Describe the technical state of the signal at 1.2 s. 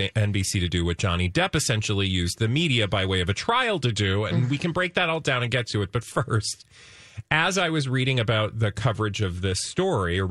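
Nothing is wrong with the signal at 1.2 s; the speech passes through intact at that point, with no dropout, distortion or other fault to be heard.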